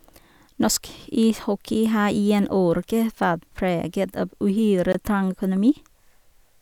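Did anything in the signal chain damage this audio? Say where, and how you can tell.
Yes, there's a short dropout in the speech from 4.92 to 4.95 s, about 20 ms of dead silence before it carries on. That points to the wireless playback link, likely a Bluetooth stall: the headphone buffer emptied while delayed packets were being resent.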